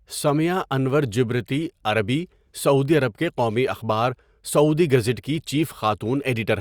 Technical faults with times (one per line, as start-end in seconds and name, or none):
none